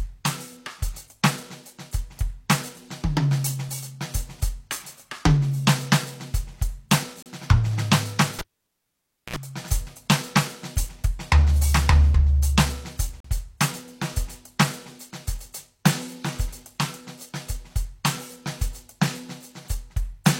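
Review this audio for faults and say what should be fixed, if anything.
There are three kinds of trouble in this music, and all of them are worth fixing.

Dropped buffer (overrun): at 3.69 s, 9.87 s and 12.14 s the music jumps forward with no silence in between. Roughly 20 ms of audio goes missing each time, and the two sides just butt together, so you hear a splice rather than a hole. The likely cause is the capture program not reading its buffer before the hardware wrapped around and overwrote it. Bigger buffers and a higher-priority capture thread should keep up.

Gap between stream segments: at 7.23–7.26 s and 13.20–13.25 s the music stops dead for a moment, about 34 ms and then about 42 ms, with hard edges on both sides. The two gaps sit 6 s apart, matching the segment length, so each one lands on a segment boundary where the timestamps don't quite meet and the player pads the difference with silence. 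Nothing is actually lost, only delayed. Stamping each segment to start exactly where the previous one ended would close these gaps.

Cable pulled and plugged in: from 8.39 to 9.36 s there's a pop, then nearly a second of near silence (about 0.92 s unplugged), then a short burst of 60 Hz mains buzz lasting about 61 ms while the plug tip makes partial contact, and a second pop as the music comes back. That's a live connection being yanked and reseated mid-take. Mute the channel before touching cables, and secure the connector so it can't get knocked loose.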